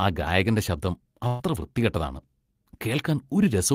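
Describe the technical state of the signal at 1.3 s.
A burst of packet loss spans 1.27 to 1.42 s, just after "ആ ഗായകന്റെ ശബ്ദം". Concealment stretches the last sound and fades it over about 120 ms of missing speech. The spectrogram shows a flat, smeared continuation decaying, then an abrupt jump.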